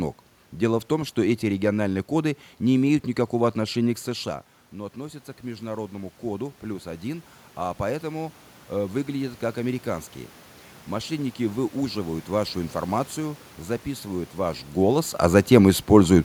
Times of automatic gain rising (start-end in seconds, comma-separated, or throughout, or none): 3.58-10.15